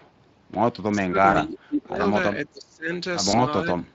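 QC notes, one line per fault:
throughout: Speex codec. Coding at about 20.6 kbps leaves too few bits for the excitation, so the speech sounds noisy and hoarse with plainly audible codec damage.
0.0–0.1 s: echo leak. An echo canceller likely let loudspeaker pickup through, returning a faint copy delayed about 450 ms, roughly 35 dB below the speech.
0.96–2.01 s, 2.35–2.92 s, 3.65 s to the end: speech suppressed in double talk. The echo canceller likely mistook overlapping talk for echo, dipping the speech by up to about 25–30 dB.
1.31–1.40 s and 3.31–3.38 s: VoIP packet loss concealed by the speech codec. One 20 ms frame was lost each time; the decoder extrapolated it from its last pitch and filter with falling gain, and the speech stays weak or distorted briefly afterwards.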